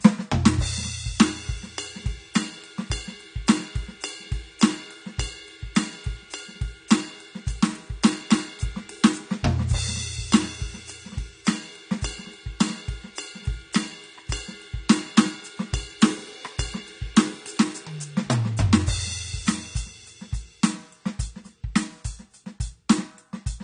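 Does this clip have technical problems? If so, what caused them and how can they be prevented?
Yes. Throughout the music there is nothing above 9.7 kHz, and the thin, smeared quality of a heavily squeezed encoding remains even though the file is an MP3 at a generous rate. This is likely low-bitrate audio saved at a high bitrate: a very low-rate encode, fitting something near 32 kbit/s AAC, later re-encoded to MP3. Unlike a simple low-pass filter, the upper band is not just dull; its detail has already been discarded. To prevent this, always encode from the original source, never from a compressed copy.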